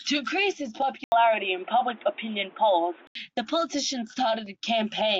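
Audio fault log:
1.04–3.15 s, input switched to a poorer device: the recording likely moved mid-take to a lower-grade microphone or a headset's call profile, then back. The speech abruptly loses everything above 3.8 kHz and turns dull and boxy, shifts in level by roughly 5 dB, and picks up a new background noise sitting around 30 dB under the speech. An 80 ms silence marks the switch, and the full, brighter sound returns at 3.15 s.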